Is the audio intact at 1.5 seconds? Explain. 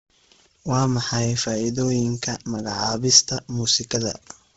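No. Bluetooth LC3 compression runs throughout, including 1.5 s, likely from a heavily squeezed LE Audio link. The speech is cut off above 7.7 kHz, with the upper band noise-filled and grainy and breathy, which fits a bitrate near 16 kbps with 10 ms frames.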